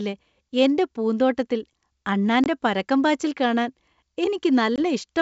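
At 2.44 s the speech drops out for about 20 ms, then again at 4.76 s. Both are packet loss on an ADPCM call, each gap fitting a single lost packet. The missing audio is filled with silence, so each hole has hard edges. ADPCM sends only differences, so the decoder's predictor and step size drift away from the sender's. When sound resumes at 2.47 s and 4.79 s, it comes back with brief distortion, settling within tens of milliseconds.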